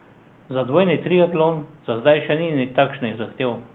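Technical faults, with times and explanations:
Nothing here counts as a technical fault; there's a low level of room noise, about 30 dB under the speech, and the audio has come through a call path using Opus at 32 kbps with the top end stopping around 12 kHz, all of which is just how this recording and connection are meant to sound.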